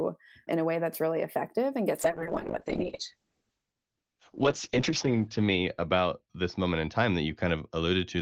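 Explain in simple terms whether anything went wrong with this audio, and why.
Something did go wrong. From about 2.03 s, right after "really effective and gets", the call hits a call bitrate drop. The connection gets far less data to describe the sound, so the audio turns rough and watery, and the top end is cut away, which makes it duller. It stays at its worst for about 3 seconds and never recovers before the end. Unlike dropouts from lost data, the sound never stops; it just loses quality.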